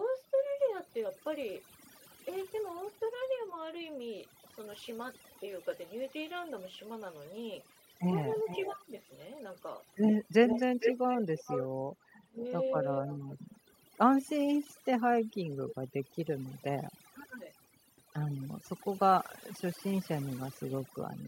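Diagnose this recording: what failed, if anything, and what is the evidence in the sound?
Overdone noise removal throughout, at the call-processing stage: the background is near-silent and twinkling, as over-strong noise reduction gates bands along with quiet speech detail.

Echo leak at 5.59–6.51, 7.71–9.18, 10.46–13.54 and 15.69–15.75 s: a delayed copy of the speech, about 457 ms late (514 ms in the last case), ranges from very faint to nearly as loud. The likely cause is residual loudspeaker echo passing an incomplete echo canceller.

Speech suppressed in double talk at 8.08–8.92, 12.23–12.39 and 17.15–17.49 s: the speech dips by about 20–30 dB in pieces, likely because the echo canceller attenuated its own talker along with the loudspeaker echo during overlap.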